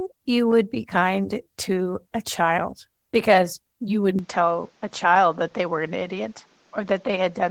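At 4.19 s the speech turns duller, losing everything above 7.6 kHz, with new background noise about 35 dB down. The likely cause is an input switched to a poorer device.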